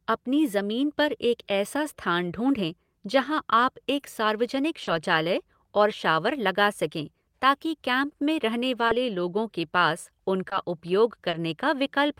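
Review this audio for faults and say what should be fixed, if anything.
Short concealed packet loss occurs six times in this speech: at 3.99–4.03 s, 4.83–4.89 s, 8.09–8.13 s (between "लगा सकें ताकि कैम्प" and "में रहने"), 8.87–8.91 s (before "लोगों के पास"), 10.49–10.53 s (after "लोगों के पास"), and 11.29–11.35 s. In each, 20 or 40 ms of audio never arrived, and the receiver patched the gap by extending the preceding sound before blending back. Unlike a hard dropout, there is no silence or click, only a brief smear or wobble. Adding jitter buffering and forward error correction, or improving the network path, would prevent these gaps.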